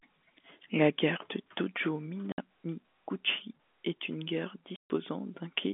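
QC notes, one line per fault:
2.32–2.38 s and 4.76–4.90 s: packet loss filled with silence. Gaps of 60 ms and 140 ms drop to dead silence with hard edges, fitting 20 ms packets, unlike a fade or a concealment smear.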